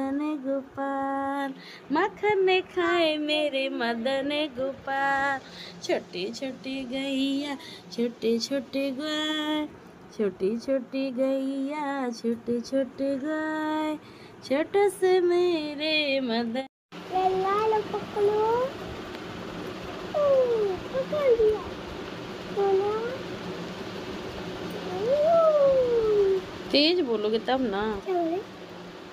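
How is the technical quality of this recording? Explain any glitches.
There are no glitches to explain, and the technical quality of this recording holds up throughout.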